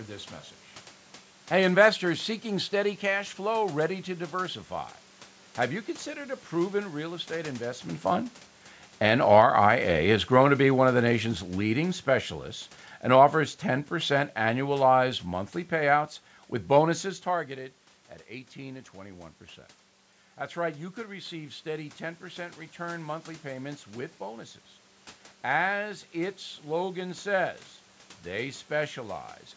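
From 7.9 to 17.0 s, automatic gain falling sets in. Finding the input too loud or its background noise too strong, the control cuts about 9 dB. Voice and background sink together.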